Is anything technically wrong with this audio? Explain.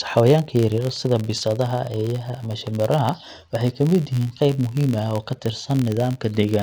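Yes. Throughout the speech there is a steady buzz at about 86.1 Hz, a rapid train of small ticks that grows louder and softer with the voice and drops away in the quieter moments. This is a filter restarted on every block: its memory is wiped at each block boundary, so each block opens with a small transient as the filter starts again from silence. The tick rate fits a 512-sample buffer.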